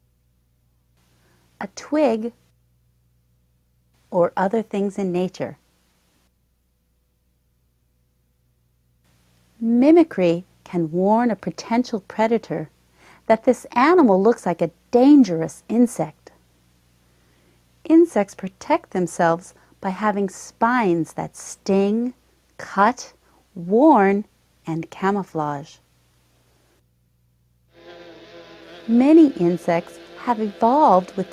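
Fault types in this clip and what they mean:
No technical faults can be heard anywhere in the signal.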